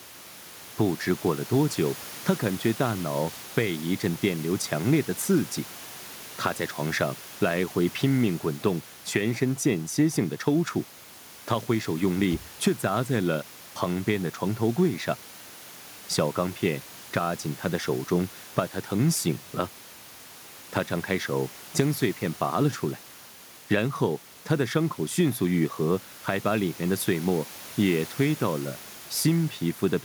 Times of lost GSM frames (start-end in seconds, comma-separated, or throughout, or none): none